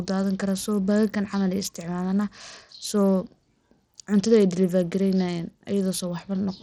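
Bluetooth SBC compression runs through the whole speech clip, from start to finish, and is likely the cause of the damage heard. The sound is split into a few wide frequency bands with no hearing model guiding the bit allocation, and the starved upper bands get little or nothing, which fits a low bit rate of around 80 kbps. The treble thins and flickers, while a gritty, coarse-grained noise and aliasing ride on the speech.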